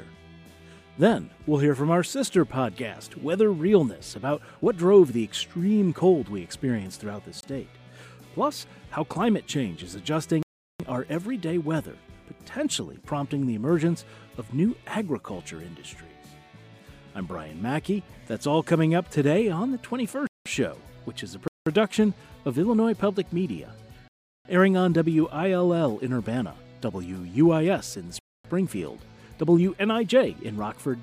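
You'll hear blocks of digital silence at 7.41 s (a quick 23 ms gap), 10.43 s, 20.27 s, 21.48 s, 24.08 s and 28.19 s, lasting 0.37, 0.19, 0.19, 0.37 and 0.25 s. Each cuts hard to silence and back. The neatly doubling lengths suggest output buffers going unfilled.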